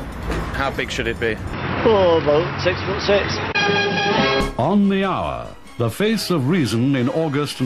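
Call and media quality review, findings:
Dull, band-limited sound 1.53–4.41 s, nothing above 5.7 kHz, level jumps around 5 dB, faint new noise floor; likely input switched to a poorer device.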